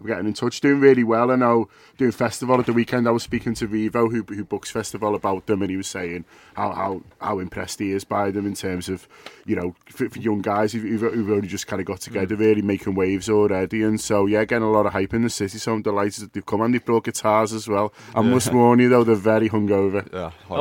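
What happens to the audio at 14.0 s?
At 14.0 s you're in the middle of a stretch of mains hum, running from about 12.78 to 15.15 s. It's a steady 60 Hz drone with a few low harmonics, sitting roughly 30 dB under the audio, the sort of thing a ground loop or nearby transformer leaks into the signal.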